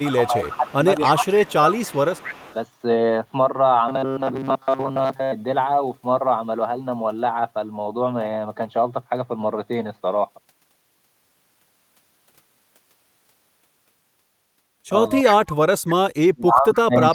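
From 0 to 2.54 s an echo leak is heard: a delayed copy of the speech trails it by 283 ms, about 15 dB down. The likely cause is a loudspeaker on the far side whose echo canceller let its own microphone pickup return. A fixed lag like this separates it from room reverberation. From 0.17 to 1.81 s, speech is suppressed in double talk. The likely cause is that same canceller turning everything down while both sides spoke. For about a second in total the talker dips by up to roughly 15 dB. From 3.89 to 5.33 s comes robotic sound from repeated short buffers: a rigid metallic buzz at 134 Hz, with roughly 70% of the audio being repeats. This likely comes from late audio being filled by looping a chunk that fits a buffer of about 7.5 ms. The constant pitch distinguishes it from codec warble. The echo leak returns briefly at 15.25 to 15.56 s, again at 283 ms and about 10 dB down. Double-talk suppression then cuts the talker from 15.84 s to the end, with drops of up to around 40 dB.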